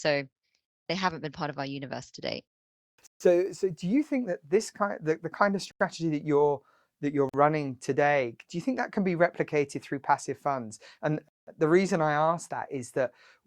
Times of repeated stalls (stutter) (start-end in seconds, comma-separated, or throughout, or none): none